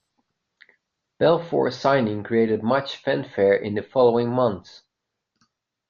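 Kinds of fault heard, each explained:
No faults can be heard in this recording.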